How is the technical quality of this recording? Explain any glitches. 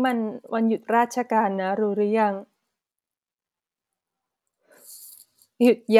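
No glitches are audible anywhere in the speech, so there is nothing to explain.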